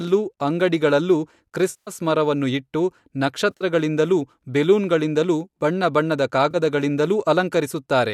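Speech, with AAC frame loss with concealment at 1.70–1.91 s just before "ಮರವನ್ನು ಇಟ್ಟು", around 3.51–3.64 s as scattered dropouts, and at 6.51–6.56 s right after "ಬಣ್ಣ ಬಣ್ಣದ". In each gap the decoder rebuilds the missing audio from the last good spectrum, so the sound turns smeared, noisy or phasey. On a spectrogram these spans show blurred smudges. Slight graininess throughout is likely from the low-delay AAC compression.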